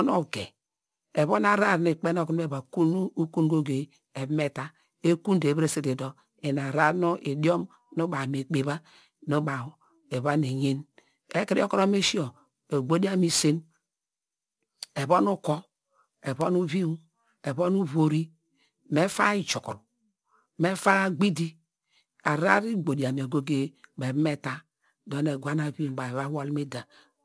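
Aliasing throughout: unfiltered downsampling folds content above 11 kHz down, making sibilants gritty; the spectrogram runs hard to 11 kHz, with mirrored traces about 25 dB down.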